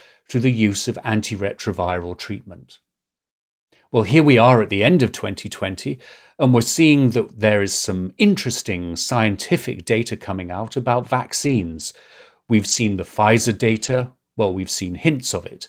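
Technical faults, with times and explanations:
1.81–1.95 s, 11.43–11.81 s (just after "data coming out about"), 12.67–12.93 s, 13.67–14.01 s and 14.47 s: lost packet rebuilt from error correction. Each loss was refilled from a low-bitrate backup copy carried in the following packet, so the speech continues with no gap, only briefly rougher and noisier. Unlike packet-loss concealment, nothing is repeated.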